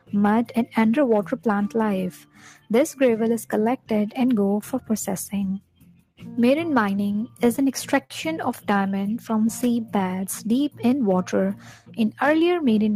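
Noise suppressor applied to music or sounds, throughout: a speech-oriented suppressor stays active and treats sustained tones, ambience and decays as noise. It pulls them down by a varying amount, around 5 dB, so the sound pumps and thins as held material sinks while attacks pass.

Sound cut by the noise suppressor, 2.2 to 2.7 s: here the suppressor misjudges the sound as noise and attenuates it harder, by up to about 11 dB, over roughly 0.4 s. Sustained parts dip audibly and their tail ends early.

The same cut returns at 5.6 to 6.2 s, dropping up to about 12 dB over roughly half a second. Fading material collapses faster than it should before the level recovers.

Repeated stalls (stutter), 7.07 to 8.12 s: the jitter buffer ran dry nine times as packets arrived late. The receiver held the last sound for 142 ms in total, the longest wait 60 ms, so nothing is lost but the audio catches and drags.

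Jitter buffer slow-down, 8.94 to 10.96 s: to rebuild its reserve, the receiver repeated short periods and pauses, adding 149 ms. Playback runs at about 93% speed without a pitch change, so the sound stretches out.

Sound cut by the noise suppressor, 11.56 to 11.98 s: a final misclassification pushes the sound down by up to about 11 dB over roughly 0.4 s, sinking its sustain and clipping its decay.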